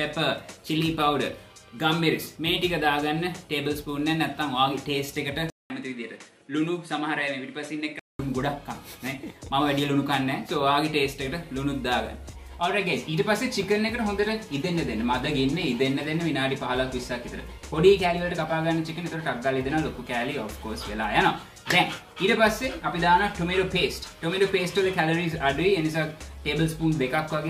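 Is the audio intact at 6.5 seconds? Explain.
No, at 6.5 s you're inside a stretch from 5.5 to 8.19 s where the input has likely switched to a poorer device. It opens with a 200 ms gap, then the sound turns duller with nothing above 11.4 kHz, drops a few dB, and picks up a faint new noise floor.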